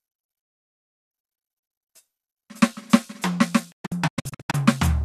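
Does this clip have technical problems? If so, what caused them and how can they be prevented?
Yes. The music mutes from 0.43 to 1.11 s after a fast 8 ms fade, then from 3.71 to 4.55 s it breaks into scattered short holes, each up to 0.12 s long. This is a digital broadcast dropout: the receiver lost corrupted frames and muted, so that music never returns. Stronger reception, a better antenna or stronger error protection prevents it.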